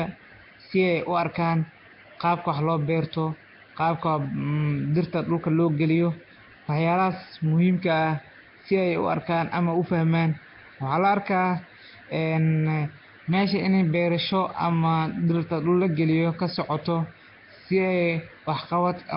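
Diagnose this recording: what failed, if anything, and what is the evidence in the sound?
Codec stage, likely Nellymoser compression: throughout, the speech sounds hissy and underwater because bit-starved bands are refilled with noise. A spectrogram shows nothing above 5.3 kHz.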